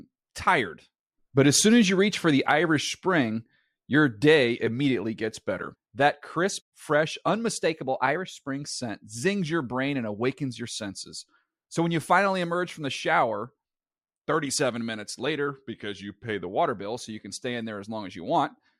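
A likely drift correction step, where clock-matching software jumped the playback rate to rebalance its buffer, shifts this speech twice. From 7.57 to 8.49 s, after "crisp fresh" and until "scent zings your brain", the rate rises 6.2%, lifting pitch about 104 cents, roughly a semitone. From 15.47 to 16.49 s, just before "water bill so you", it drops 6.2%, about 111 cents flat. Each time the voice's speed and pitch shift together.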